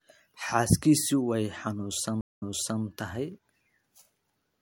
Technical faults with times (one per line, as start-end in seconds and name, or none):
2.21-2.83 stream reconnect